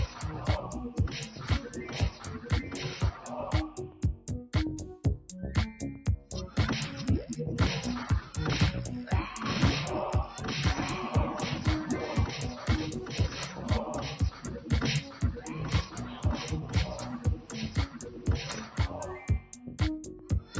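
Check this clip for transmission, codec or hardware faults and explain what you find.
Two faults are present, both from a speech noise suppressor acting on non-speech audio.

Noise suppressor applied to music or sounds, throughout: the speech-tuned suppressor treats steady content as noise, swinging level by around 10 dB, so the audio pumps and thins.

Sound cut by the noise suppressor, at 3.88–4.27 s, 15.06–15.21 s, 17.36–17.52 s, 17.69–18.27 s, 19.4–19.8 s and 20.12–20.53 s: held or decaying passages dip by about 7 dB (about 4 dB at 15.1 s), sinking audibly while sharp onsets survive.

The call's microphone path, with nothing above 8 kHz, is heard as normal band-limiting.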